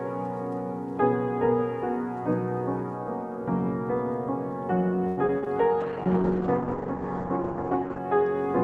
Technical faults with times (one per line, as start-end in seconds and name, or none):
5.07-5.48 repeated packet loss (robotic sound)
5.81-8.06 call bitrate drop